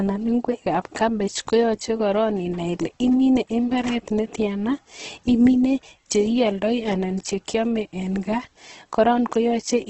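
Throughout, the speech sounds grainy and rough, with noisy texture where cleaner tones should be and nothing above 8.2 kHz. The likely cause is heavy Opus compression in its CELT mode, filling starved bands with folded or noise content, which fits a bitrate around 12 kbps.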